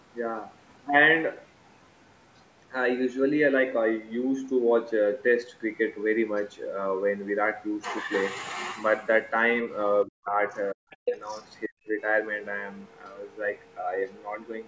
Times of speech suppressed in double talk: 10.05-10.36, 10.72-10.87, 11.67-11.91

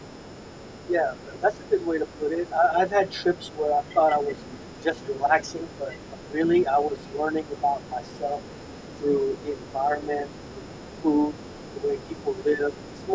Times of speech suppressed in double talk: 0.89-8.38, 9.00-11.10, 11.84-13.15

